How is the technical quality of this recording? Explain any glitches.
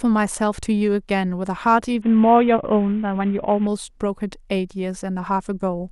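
The recording has one glitch, a Bluetooth SBC bit pool drop, from 2.02 s to 3.67 s. The link apparently came under strain and the encoder gave each block far fewer bits. The upper sub-bands were starved and the remaining ones coarsely quantised. The speech turns dull and gritty, which fits a bit pool falling from about 28 to 5, near 54 kbps. Unlike a plain low-pass filter, grainy noise rides on the sound, and unlike packet loss it never drops out.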